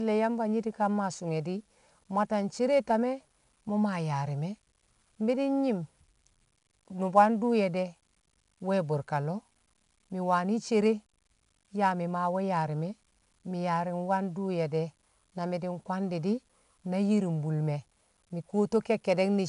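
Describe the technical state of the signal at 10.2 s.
At 10.2 s the speech carries 4-bit ADPCM compression, present for the whole clip. Each sample is coded as a coarse 4-bit step from a prediction, so a gritty hiss rides on louder passages. Nothing is heard above 10.7 kHz, consistent with roughly 22 kHz sampling.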